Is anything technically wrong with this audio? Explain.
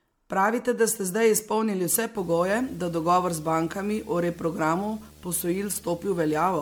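Yes, two faults can be heard in this speech clip.

Throughout, the sound is swirly, hollow and smeared, with blurred attacks and nothing above 19.9 kHz. This is generation loss. The likely cause is repeated MP3 decoding and re-encoding, on the order of fifteen passes, each quantising on a shifted frame grid so noise and spectral holes accumulate. The band limit fits a 128 kbit/s MP3, but a single encode at that rate would not sound this degraded.

From 2.16 s to the end there is video or display buzz, about 25 dB below the signal. A screen or video cable couples interference into the audio. Here it is a buzz at a 75 Hz field rate with raspy hash above it. Unlike mains hum at 50 or 60 Hz, it sits at a display refresh rate and has a harsh, gritty edge rather than a smooth tone.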